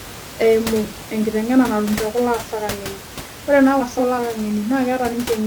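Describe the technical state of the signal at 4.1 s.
At 4.1 s the frames are out of order, from 3.80 to 4.19 s after "ang'eni ore naa". Two adjacent blocks of about 186 ms play swapped, producing a garbled flutter.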